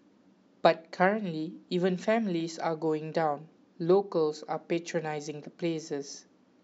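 No technical faults can be heard anywhere in this recording of speech.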